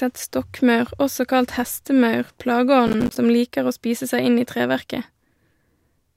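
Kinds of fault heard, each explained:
Processor overload crackle: a gritty, tearing crackle runs from about 2.87 to 3.16 s, right after "stokkmaur også kalt hestemaur". The processor missed deadline after deadline, leaving short silent gaps with hard edges, a pattern suggesting roughly 10 ms buffers dropping out in a run.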